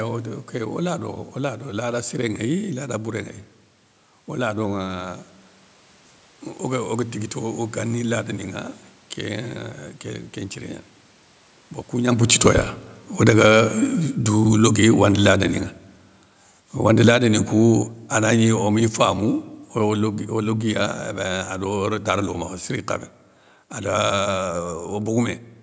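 From 11.99 to 15.44 s, then 16.85 to 21.95 s, automatic gain falling lowers the level by about 4 dB and then about 8 dB. Unlike the talker's movement near 12 s, the room noise sinks along with the speech.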